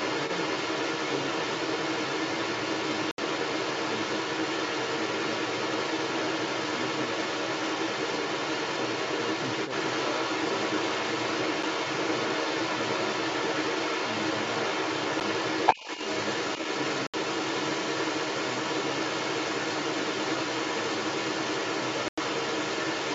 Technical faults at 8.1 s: other side's voice leaking through

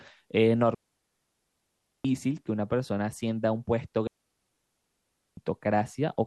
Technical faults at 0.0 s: none

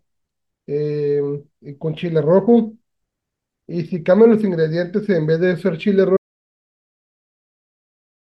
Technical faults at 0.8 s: none

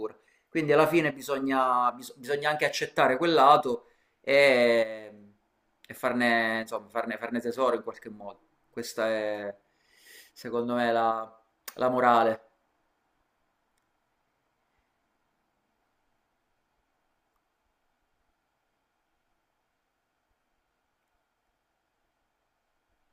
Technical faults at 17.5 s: none

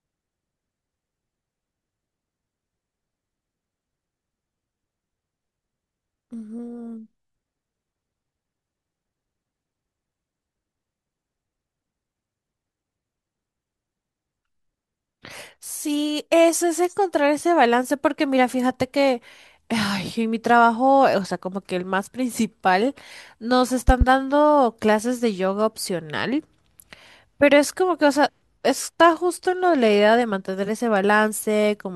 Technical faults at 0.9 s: none

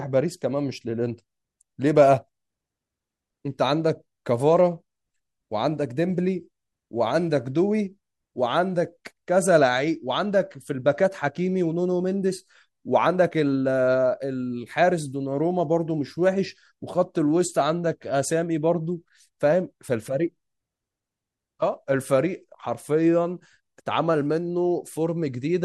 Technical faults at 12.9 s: none

